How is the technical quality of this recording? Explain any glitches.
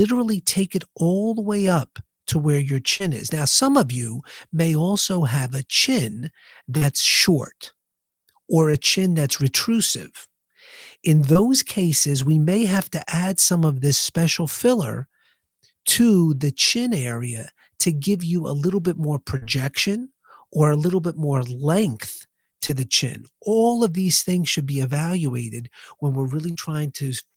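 The speech carries seven brief dropouts typical of a lossy network call.

Short concealed packet loss occurs six times, at 2.97–3.04 s, 6.77–6.83 s, 8.71–8.75 s (just before "chin that's retrusive"), 11.33–11.37 s (just before "cases we may have"), 22.67–22.71 s and 26.51–26.57 s. Each sounds like a quick smear or wobble in the voice. In each case 20 to 40 ms of audio failed to arrive in time. The receiver patched 15 to 41 ms by extending the preceding sound, then blended back into the real signal. The first patch also trimmed about 5 ms.

A burst of packet loss follows "a little bit more", at 19.37–19.43 s. The last sound there is held and fades before the voice returns slightly further on. About 40 ms went missing. The decoder filled 45 ms by continuing the last sound and turning it down, so the underlying moment is simply gone.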